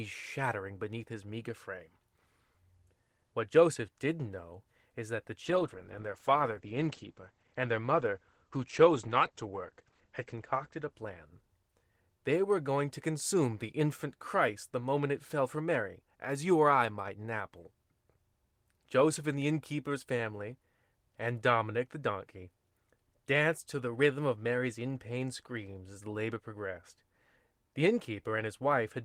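Speech, and from 5.45 s to about 12.39 s, right after "know is that the" and up to "were going to consume", there's a call bitrate drop. The encoder gets squeezed from 32 kbps down to 14 kbps and sits at its lowest for about 4.9 s. The top end goes with it, bandwidth falling from 20 kHz to 8 kHz, so that stretch sounds muffled, rough and watery until the rate climbs back.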